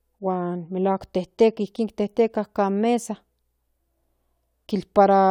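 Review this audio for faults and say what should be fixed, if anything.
No faults turn up in this audio, so nothing needs to be fixed.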